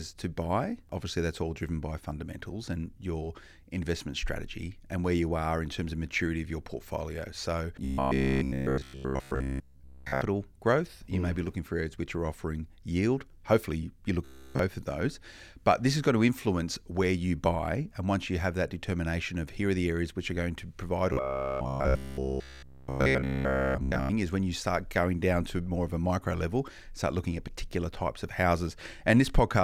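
At 7.84 to 10.21 s, again at 14.25 to 14.59 s just before "of those", and at 21.13 to 24.09 s between "going to provide" and "is when you start", the speech collapses into a stiff metallic buzz at 66.7 Hz that only loosely tracks the words. It's robotic sound from repeated short buffers, likely a 15 ms chunk looped over and over while the real audio was skipped, covering essentially all of each stretch.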